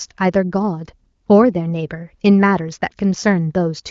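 No technical faults are audible in this speech, whose bandwidth ends at about 7.4 kHz and whose clarity fits the AMR wideband (HD Voice) codec at a high rate of around 23 kbit/s.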